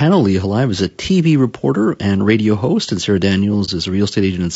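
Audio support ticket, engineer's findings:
Low-delay AAC compression, whole clip, 0 to 4.6 s: speech rough and grainy throughout, plainly audible. Noise fills the gaps between voice harmonics; top band sounds dulled and partly synthetic. Likely cause: an AAC-ELD style low-delay encoder. Short frames resolve pitch harmonics poorly and spend bits inefficiently. Damage level fits a bitrate around 32 kbps.

AAC frame loss with muting, 3.65 to 3.69 s: brief soft-edged dropout. Consistent with a single lost frame of about 30 ms, its spectrum zeroed by the decoder. Overlapping transform windows fade the sound down and back up, spreading the hole to about 40 ms.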